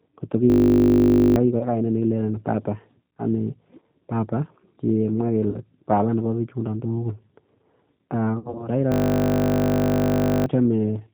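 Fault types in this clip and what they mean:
G.729 codec: an 8 kbit/s model-based speech codec; throughout, the speech is band-limited to 4 kHz and sounds plainly rough and synthetic.
System hang loop: the playback buffer recycled a 20 ms slice, giving a steady 50 Hz buzz at 0.5–1.36 s after "kot ko" and 8.92–10.46 s.
VoIP packet loss concealed by the speech codec: the decoder extrapolated over lost 20 ms packets, leaving brief fading patches of buzzy tone or coloured noise at 1.59, 3.8, 5.5 and 8.39–8.69 s.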